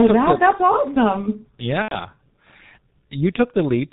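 Throughout, the speech sounds muffled and hoarse, with nothing above 4 kHz and smeared consonants. This is heavy G.723.1 codec damage, consistent with its 6.3 kbit/s mode. From 1.82 to 1.96 s the sound turns into a buzzy tone or coloured noise that fades, and stays weak afterward. This is VoIP packet loss concealed by the speech codec: roughly 90 ms, about three 30 ms frames, was extrapolated from the last pitch and filter.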